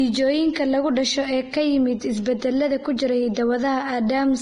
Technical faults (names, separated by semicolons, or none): low-bitrate audio saved at a high bitrate